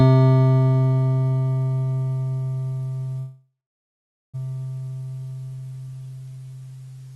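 A music recording carried over a call link, its top end stopping at about 12 kHz, consistent with a call codec running near 32 kbps. At 3.19 s the music stops moving and the last sound is drawn out into a fading buzz that drops to silence for roughly 0.8 s, then the music resumes at 4.36 s exactly where it left off, with nothing skipped. This is a call audio freeze, likely caused by packets stalling in transit until the jitter buffer ran dry. The receiver filled the 1.14 s wait with synthesized sound, so the music is delayed by that amount rather than losing any content.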